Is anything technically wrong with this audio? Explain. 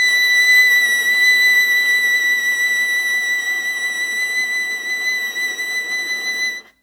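Yes. Throughout this music, a swirly, hollow smear blurs attacks, beyond what single-pass 128 kbit/s WMA would cause; generation loss from roughly ten re-encodes is likely, with content still reaching 20.1 kHz.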